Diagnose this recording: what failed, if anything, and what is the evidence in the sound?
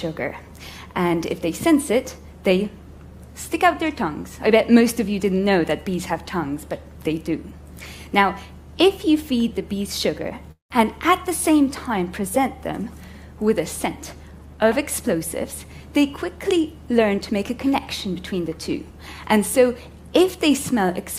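Call audio freeze at 10.51 to 10.72 s: a network stall, likely, drained the jitter buffer, so the last sound was stretched as a fading buzz or hiss, then 130 ms of silence, before playback resumed intact.

Jitter buffer speed-up from 15.96 to 18.49 s: the receiver trimmed pitch-period slices to cut the built-up delay, running the audio about 4% fast at unchanged pitch and dropping about a tenth of a second.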